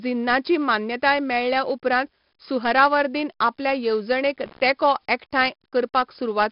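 4-bit ADPCM compression runs throughout this speech: coarse predicted steps add gritty, level-following hiss, and nothing above 5.3 kHz survives, consistent with a low-rate, roughly 44 kbps stream.

An intermittent contact at 4.46 to 4.60 s, after "सुहरावर्दीन आपल्या येवजणेक" and before "तेंको एकठांय", opens the line for about 72 ms, cutting the sound with crackle at both edges.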